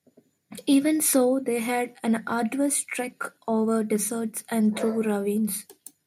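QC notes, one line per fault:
No faults found in the speech recording. Nothing here calls for a QC entry.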